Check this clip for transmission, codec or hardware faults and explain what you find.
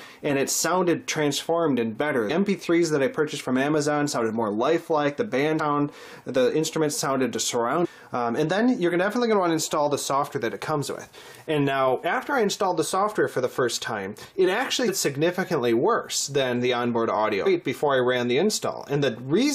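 Five short faults from damaged data in a compressed stream occur at 2.29 s, 5.59 s, 7.84 to 7.86 s, 14.87 s and 17.45 s. Corrupted bytes make the decoder misread frames and lose sync, producing brief chirps or blips.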